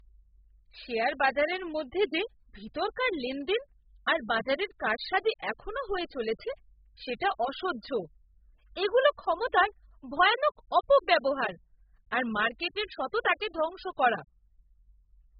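Low-bitrate audio saved at a high bitrate runs throughout the speech. Nothing is present above 5 kHz, and the smeared, watery texture of heavy compression stays audible even though the file is stored as high-bitrate MP3, around 192 kbit/s. The likely cause is an earlier pass through a very low-bitrate codec, consistent with AAC at about 8 kbit/s. Re-encoding it at the higher rate kept the first codec's cut-off and artefacts and restored none of the discarded detail.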